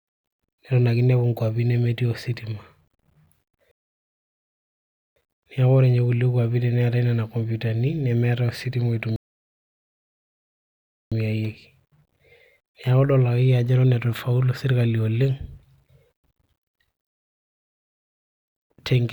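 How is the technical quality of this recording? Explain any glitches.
Three rebuffering stalls interrupt the speech. Each time, the player exhausted its downloaded audio and halted playback until more data arrived, so the sound drops to silence and then picks up exactly where it left off, with nothing skipped. The gaps run from 3.71 to 5.16 s, 9.16 to 11.12 s, and 17.12 to 18.44 s, adding about 1.4 s, 2.0 s and 1.3 s of dead air respectively.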